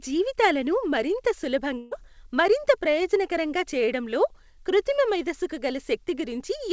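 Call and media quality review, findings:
Burst of packet loss, 1.78 to 1.93 s, just before "మరింత ప్రయోజనకరంగా చేయడంలో కృత్రిమ". Jitter buffer concealment. About 130 ms of the preceding sound is stretched and fades. About 140 ms of speech is missing before playback resumes. Call path band-limited at 8 kHz, consistent with G.722.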